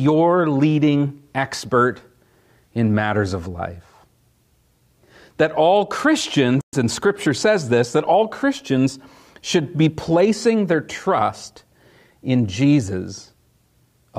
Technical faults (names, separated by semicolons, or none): playback stall